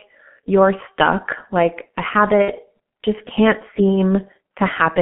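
Throughout, the speech has passed through the G.723.1 codec at a very low bitrate, with heavy damage that fits its 6.3 kbit/s mode. The line band runs only from 150 Hz to 3.4 kHz. The codec models the voice in coarse 30 ms steps, so the sound is muffled and hoarse. Consonants smear together, and the top end is missing entirely.

From 2.42 to 2.52 s, after "you're stuck like a" and before "just can't", there is VoIP packet loss concealed by the speech codec. About 60 ms of audio, consistent with two lost frames, never arrived. The decoder filled the gap by extending its last pitch and filter settings at steadily falling gain. The result is a brief stretched sound, a buzzy tone or coloured noise, that fades. The voice stays weak or distorted for tens of milliseconds or more as the decoder recovers.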